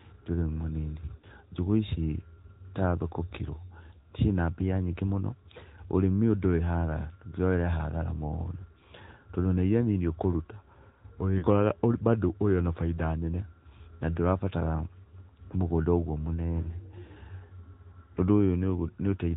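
From start to finish the speech carries the AMR narrowband mobile codec sound: nothing above 4 kHz survives, and the vocal-tract model rebuilds the speech from sparse pulses, so it has a plainly audible buzzy, synthetic edge. The damage fits a mid-rate AMR-NB mode around 10.2 kbps. Unlike a plain low-pass filter, which only dulls the sound, this adds grainy, artificial texture to the speech itself.

At 1.18 s and again at 11.38 s there are lost AMR speech frames. Each event spans about 0.07 s, and the missing audio amounts to about 40 ms, which fits two 20 ms frames. The decoder filled the gap by repeating the last good pitch and vocal-tract settings at falling gain, so each spot is a short smeared warble and dip, not a hard dropout to silence. The speech then returns rough for a moment. A packet-loss click or a muted gap would sound abrupt instead.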